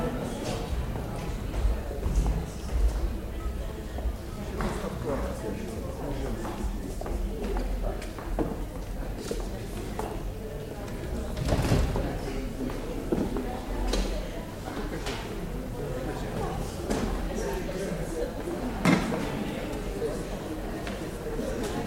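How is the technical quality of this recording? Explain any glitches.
No glitches to explain: nothing in the recording shows any audible technical fault.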